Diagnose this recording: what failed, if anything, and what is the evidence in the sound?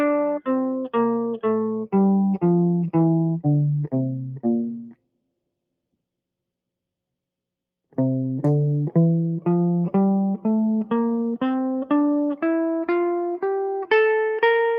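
The failure sits in call processing: sound cut by the noise suppressor. From 4.71 to 5.23 s the music sinks sharply, by about 19 dB at its deepest, for something like 0.4 s of audible loss, because the suppressor mistook sustained musical content for background noise and applied heavy gain reduction. On a waveform the envelope pinches inward across that span. A spectrogram shows the steady partials fading or thinning, while sharp attacks still stand out.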